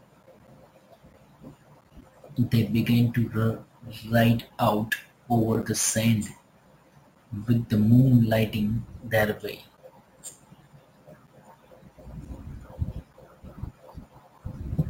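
Imaging from sample-and-hold upsampling runs through the whole speech recording, from start to finish. The rate was raised by holding each sample for several output samples instead of interpolating and filtering. This left a mirrored copy of the spectrum between 8 and 16 kHz, which points to an original 16 kHz rate carried up to 44.1 kHz. The copy sits about 20 dB below the speech and rises and falls with it as a bright metallic fizz. Its lowest band moves opposite to the pitch.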